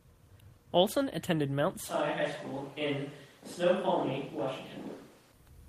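At 1.9 s the speech abruptly turns roomy and hollow, with thinner low end, and stays that way until 5.31 s, where it snaps back just as suddenly to its earlier close, full sound. This is likely a switch to a distant microphone, with the close microphone's signal dropped in favour of one farther from the talker. The speech level stays about the same, but background room noise becomes audible, sitting roughly 30 dB below the speech.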